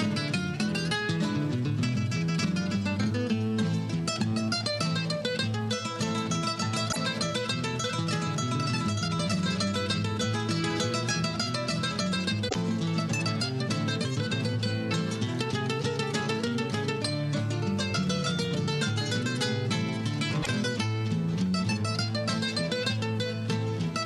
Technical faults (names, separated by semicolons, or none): damaged data in a compressed stream